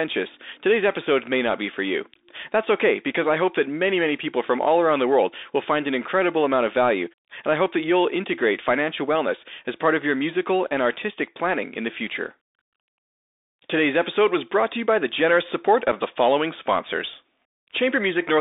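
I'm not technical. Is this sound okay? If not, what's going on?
No. The whole recording sounds thin and muffled, like a phone call, with a grainy hiss under the speech and harsh, scratchy s sounds. This is the Bluetooth CVSD headset codec, the basic format headsets use for calls. It squeezes the sound into a narrow range of roughly 300 Hz to 3.7 kHz, dropping the bass and the crisp upper detail. It also records the sound as a rapid series of tiny up and down steps, which adds the grain and roughens sharp sounds.

At 15.92 s there is a tiny dropout, a gap of about 7.5 ms with an abrupt edge that can sound like a small click. This is unconcealed Bluetooth headset packet loss. One short chunk of sound travelling between the headset and the phone went missing, and nothing was done to smooth over the hole.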